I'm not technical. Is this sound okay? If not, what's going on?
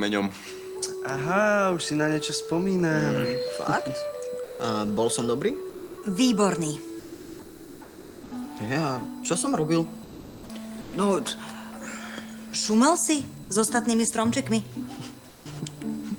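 No. A faint, steady, high-pitched whine runs underneath the whole clip. This is USB whine: electrical noise from a USB connection leaking into the audio as a fixed tone.

The sound also briefly cuts out to a soft hiss or near silence at 4.43–4.59 s, 5.69–5.97 s, 6.99–8.31 s, 10.03–10.49 s, 10.81–10.93 s and 15.29–15.45 s. This is likely sound dropped by the voice detector, which mistook real sound for background and stopped sending it.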